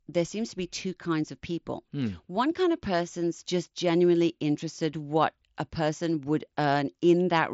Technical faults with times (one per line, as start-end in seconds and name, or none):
none